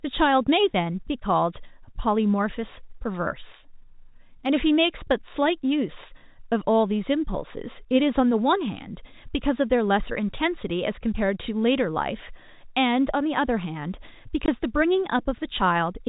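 At 14.46 s the speech drops out for 20 ms, a clean gap with abrupt edges. This is packet loss filled with silence: one packet's worth of audio never arrived, and the receiver inserted digital silence instead of concealing the loss. The gap length fits a 20 ms packet interval. The surrounding audio carries the 4 kHz band limit of G.711 telephone coding.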